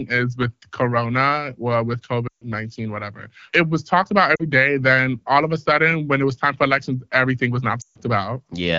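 Lost AMR speech frames: failed checksums forced the AMR-WB decoder to repeat its last speech settings at falling gain. After "well with" (2.27–2.44 s) and "for elections everything was" (7.81–7.99 s), the speech drops to near silence within two frames, with about 140 ms lost each time. After "it was talked about" (4.35–4.43 s), there is a brief dip.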